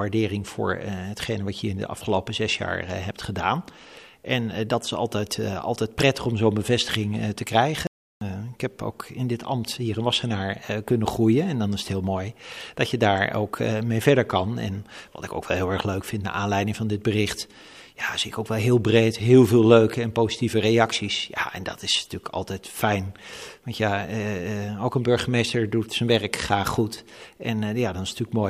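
A playback stall interrupts the audio at 7.87 s: the sound cuts to silence for about 0.34 s and resumes at 8.21 s. The likely cause is the player running short of data or its output thread being blocked, leaving nothing to play until it recovered.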